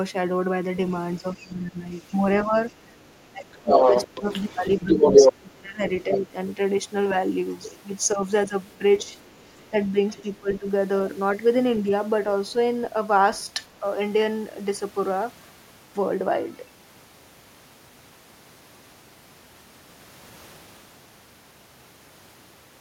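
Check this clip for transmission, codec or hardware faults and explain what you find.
Two echo-path faults recur through the first 12.6 s of the clip, both pointing to an echo canceller struggling while the far end plays over a loudspeaker.

Other side's voice leaking through occurs at 1.39 to 6.2 s, briefly at 7.71 to 7.78 s, and at 8.98 to 10.58 s. Far-end speech, likely left behind by incomplete echo cancellation, is picked up by the microphone. It sits louder than the talker in the first stretch and faint afterwards.

Speech suppressed in double talk happens at 1.42 to 6.35 s, 8.14 to 10.67 s and 11.83 to 12.56 s. With both sides active, the canceller likely attenuated the near-end talker along with the echo. Dips are deep in the first span, moderate in the second, and slight in the third.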